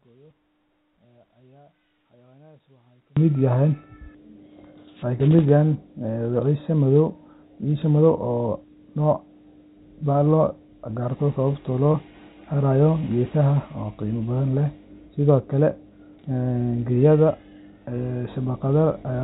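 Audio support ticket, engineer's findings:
0.00–3.17 s: speech drops by about 34 dB, leaving a faint residue. Likely one channel inverted, so the shared centre content cancels on the mono fold-down and only the inter-channel difference survives. Level restores after 3.17 s.

11.92–11.94 s: brief held, buzzy repeat of the last pitch cycle, then normal speech resumes. Packet loss with pitch repetition, where the concealer bridged a 20 ms gap, which fits a single dropped packet. G.711 A-law path carries through unaffected.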